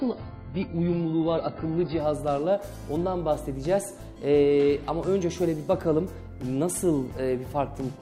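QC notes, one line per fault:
0.0 to 2.0 s, adaptive stream starting at a low bitrate: nothing above 5.1 kHz and heavier codec artefacts, consistent with a starting rendition near 12 kbit/s AAC. At 2.0 s the player switches to a fuller rendition, likely around 96 kbit/s, and quality jumps without any gap.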